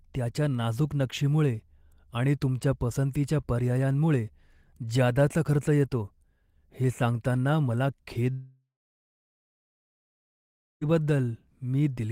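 Right after "हे सांगतांना मला", at 8.31 s, the speech turns into a fading buzz, then about 2.1 s of silence, resuming at 10.83 s with 2.5 s of speech lost. A long network dropout is the likely cause, with the receiver padding audio that never arrived.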